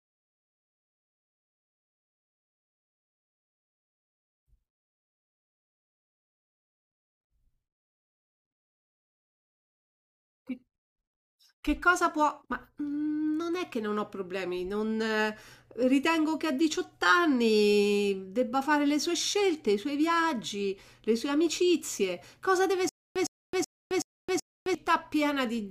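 The playback or stream most likely stalled near the end of this speech recording, and each time it retried it replayed its last buffered fragment before running dry again. That produces a stutter with silent gaps from 22.89 to 24.75 s: a burst of about 110 ms repeats five times, each followed by roughly 267 ms of dead digital silence, a steady cycle of one burst every 376 ms. The speech that should have filled that stretch is simply lost.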